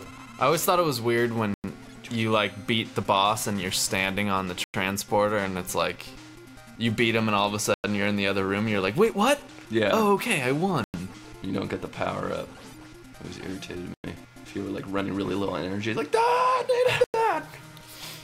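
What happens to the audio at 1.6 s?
A gap between chunks opens from 1.54 to 1.64 s. The audio was handled in pieces about 3 s long, and at this join the next piece did not follow on directly, so 100 ms of silence was inserted between them. Nothing is missing from the sound itself; it simply stops and restarts. The result is a short hole: the sound stops at 1.54 s and resumes at 1.64 s.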